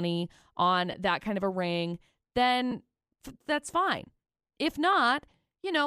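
Around 0.92 to 0.94 s, just before "that kind of a", then at 2.71 s and 4.93 s, the speech has lost LE Audio frames. The decoder papers over each gap by repeating recent spectrum with scrambled phase, so you get a brief noisy smear rather than a dropout. The first gap is about 15 ms, consistent with two 7.5 ms frames, and the others about 7.5 ms, which fits the frame size of the likely LC3 stream.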